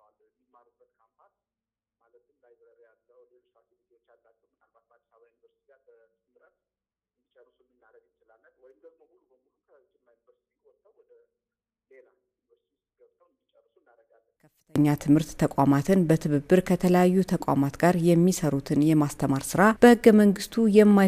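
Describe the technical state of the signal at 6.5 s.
At 6.5 s the sound is almost gone when heard in mono, dropping by about 38 dB to a faint residue. This holds from the start of the clip until 14.76 s. The likely cause is one channel inverted: one side of the stereo pair has reversed polarity, so everything common to both channels cancels when they are summed, leaving only the small difference between them.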